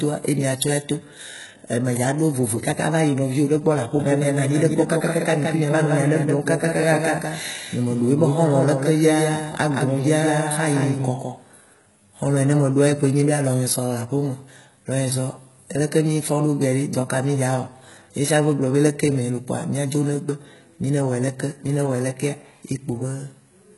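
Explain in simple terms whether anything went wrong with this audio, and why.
Yes, two things went wrong. The speech sounds like likely HE-AAC compression throughout: the treble is rebuilt rather than real, so s sounds come out gritty and lispy, not simply muffled. From 3.99 to 11.73 seconds there is a doubled audio track: a second, slightly quieter copy trails about a sixth of a second behind, with no fading tail, so it isn't a room echo.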